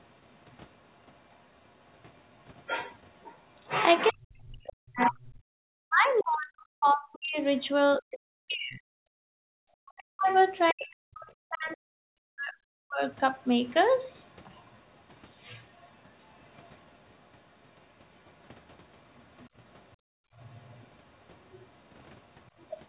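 Other side's voice leaking through, 0.52 to 7.95 s: a faint second voice sits roughly 30 dB under the speech, likely loudspeaker echo the canceller failed to remove from the microphone.

Speech suppressed in double talk, 4.11 to 13.02 s: with both sides talking, the canceller likely turned everything down, so the talker's voice dips and breaks up, at worst by something like 40 dB, for around seven seconds in total.

Background gated by the echo canceller, 9.29 to 9.48 s: the room sound drops by about 33 dB as the microphone is clamped during loudspeaker playback, then returns.

Leakage returns at 10.32 to 10.73 s, much stronger at roughly 15 dB below the speech. It comes back fainter at 13.43 to 17.27 s, near 35 dB down, and again from 19.16 s to the end at around 30 dB down. All of it sits within the 4 kHz telephone band of the G.711 mu-law path.

Background gated by the echo canceller, 19.97 to 20.34 s: a second hard dip of about 33 dB silences the room sound for roughly 0.4 s before recovering.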